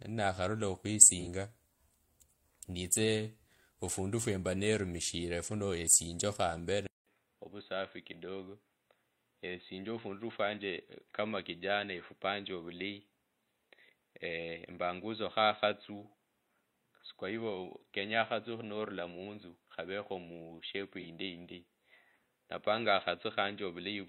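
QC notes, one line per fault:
1.14–1.27 s and 21.00–21.06 s: AAC frame loss with concealment. Each event is a brief smeared, noisy or phasey patch lasting about 43 ms, which fits a single lost frame. The decoder bridged each gap by reusing the previous good spectrum with altered phase, so the speech keeps roughly its tone and level but loses clarity. Unlike a dropout or a device switch, there is no silence and no lasting change in tone. The surrounding sound resumes immediately.
6.87 s to end: input switched to a poorer device. After a silence of about 200 ms, the speech becomes dull and boxy for the rest of the clip. Nothing above 4 kHz remains, the level drops by about 5 dB, and a new noise floor sits around 45 dB below the speech. The likely cause is a change to a narrower-band input, such as a headset's call profile. The short gap and the lasting change in bandwidth, level and noise set it apart from a codec glitch.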